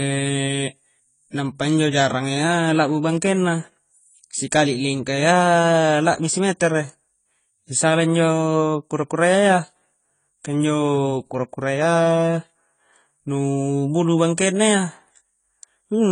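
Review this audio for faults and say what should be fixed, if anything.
The speech was likely encoded at a very low bitrate, then re-encoded as a high-bitrate MP3: low-bitrate audio saved at a high bitrate. Throughout all of it, nothing sounds above 10 kHz, so sibilants and breath lack their top, and the dull, smeared texture of heavy compression persists, which fits a source somewhere around 24 kbit/s. The larger second encoding cannot rebuild what the first discarded. Keep and work from the original recording, encoding only once from it at the final bitrate.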